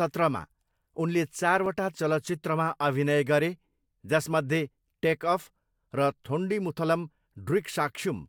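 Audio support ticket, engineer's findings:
Sharp tick at 1.66 s, just before "चलचित्रमा अभिनय": a block of digital silence about 2 ms long, hard edges both sides, pointing to an output buffer left unfilled.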